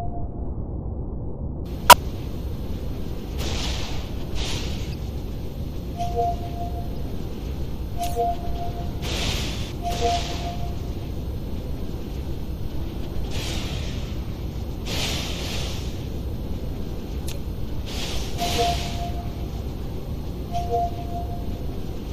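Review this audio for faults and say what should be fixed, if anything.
The whole clip has a watery, swirly quality with a dulled top end, most likely from MP3 compression at a low bitrate, something like 64 kbps. Starved of bits, the encoder drops the treble and lets weak frequency lines flicker on and off between frames. Re-encode from the original source at a higher bitrate to avoid this.

There's damaged data in the compressed stream, heard as short blips at 0.46–0.50 s, 1.90–1.94 s, 4.90–4.94 s, 6.94–6.98 s and 9.71 s. At each spot the decoder hits corrupted frames, misreads them and loses sync until it finds the next frame header. Check the file transfer or storage path, and re-fetch an intact copy.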